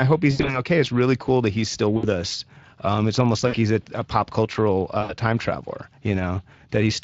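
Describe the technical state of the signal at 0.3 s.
Right after "I hope", from 0.31 to 0.61 s, there is VoIP packet loss concealed by the speech codec. About 120 ms of audio is missing, scattered over 160 ms, with the longest gap 80 ms. The decoder repeats its last pitch and filter at falling gain, so the sound smears into a fading buzzy tone or coloured noise. On a spectrogram this shows as flat, stretched harmonics; on the waveform it shows as a decaying, periodic envelope. Throughout, plainly audible Speex codec coding, consistent with a rate near 20 kbps, adds hoarse, noisy roughness.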